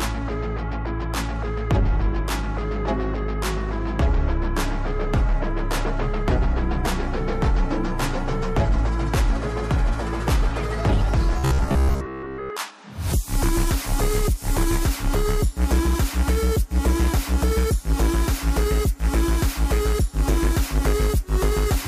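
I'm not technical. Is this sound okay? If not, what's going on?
No. From 11.39 to 12.50 s the sound turns into a rigid, metallic buzz at about 67 Hz. This is robotic sound from repeated short buffers. Audio likely arrived too slowly, so a 15 ms slice was replayed, skipping most of the real sound.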